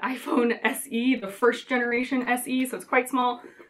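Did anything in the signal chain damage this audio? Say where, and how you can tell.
Yes, the damage happened on the network. Between 1.09 and 2.28 s the audio goes choppy, with around a dozen short holes spread through that stretch, none longer than about 20 ms. Each one is a repeated packet loss: a packet arrives late or not at all, and the receiver patches the hole by extending the last bit of sound. About 14% of that span ends up synthetic.

There's one more network hit later, a short concealed packet loss at 3.20 to 3.24 s. Here only about 20 ms went missing, and the concealment stretched the preceding sound across the hole before blending back into the real signal. On a listen it comes across as a quick smear or a tiny wobble rather than an obvious gap.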